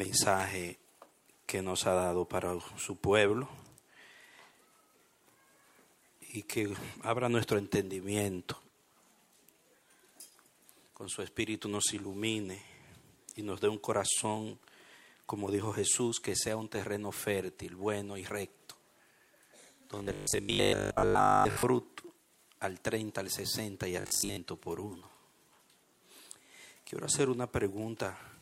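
From 19.99 to 21.63 s and again from 24.01 to 24.37 s, the sound turns into a rigid, metallic 50 Hz buzz: robotic sound from repeated short buffers, likely a 20 ms segment replayed in place of late audio, with most of the audio skipped.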